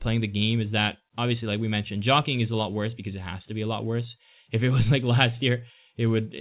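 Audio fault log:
No faults found in this speech.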